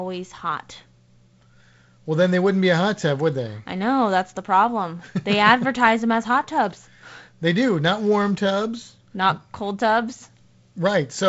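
Nothing's wrong with this speech recording: it's carried over G.722 wideband telephone coding at 48 kbit/s, with the faint upper-band hiss and the top end stopping around 7.7 kHz that are normal for that codec.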